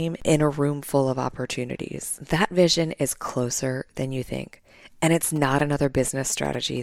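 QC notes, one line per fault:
5.36–6.78 s, GSM signalling bursts: just after "you think and it's", a galloping dit-dit-dit pattern of short buzzes starts and runs almost to the end, sitting roughly 20 dB below the speech. A nearby 2G phone is exchanging brief signalling bursts with the network, and the audio circuitry rectifies that radio energy into sound. The buzz pitch sits near 217 Hz, matching the phone's transmit burst rate.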